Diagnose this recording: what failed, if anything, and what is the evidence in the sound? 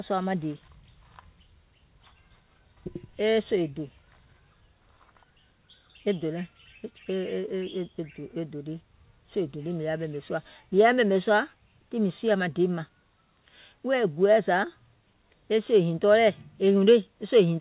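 Nothing failed: the speech carries the expected coding of a narrowband call path, consistent with G.711 mu-law at 64 kbps, and its lack of content above 4 kHz is that codec working as designed, not a defect.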